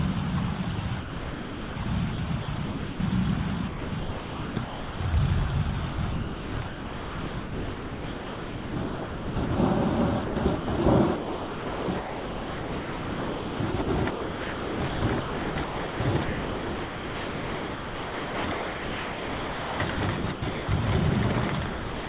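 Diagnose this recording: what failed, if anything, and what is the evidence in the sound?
Call processing is where this went wrong: the sound was chopped by the voice detector, most likely the sender's detector repeatedly deciding the sound was silence and substituting comfort noise. Gaps appear at 0.76–1.86, 2.12–3.0, 3.68–5.0, 5.92–9.5, 10.24–10.78, 11.16–20.68 and 21.5–22.08 s, the longest losing nearly 8 s. The real sound drops out and a synthetic hiss takes over. That hiss is band-limited to 4 kHz, like the narrowband call codec that carries it.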